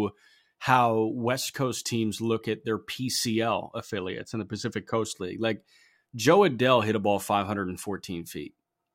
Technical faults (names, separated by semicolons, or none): channel delay (comb filtering)